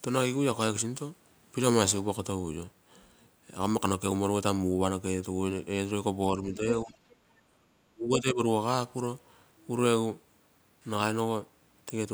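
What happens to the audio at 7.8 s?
Speech suppressed in double talk runs from 7.7 to 8.4 s, so 7.8 s falls inside it. The speech level collapses by as much as about 40 dB for roughly 0.7 s, leaving the talker nearly inaudible before returning at full level. The likely cause is an echo canceller facing both sides talking at once: unable to separate this talker from the loudspeaker echo, it suppressed everything it picked up.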